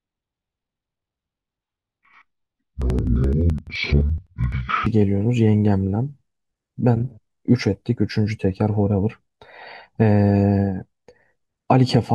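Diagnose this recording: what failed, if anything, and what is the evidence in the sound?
Interleaved audio read as planar at the sample-format conversion stage: from 0.0 to 4.94 s each 85 ms block, which fits a 4096-sample buffer, is split into halves played as left and right at half speed, so the speech drops an octave, sounds doubled and chops at 11.7 Hz.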